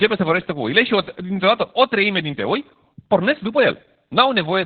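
Speech with Opus voice compression across its full length. Nothing survives above about 4.5 kHz, so the audio has the narrowband telephone quality of the SILK linear-prediction mode, which fits a bitrate around 8 kbps. At that rate the excitation signal is coded very coarsely, and the damage is heavy: the speech comes across muffled and hoarse, with a slightly robotic texture where the codec's rough model replaces the natural detail of the voice.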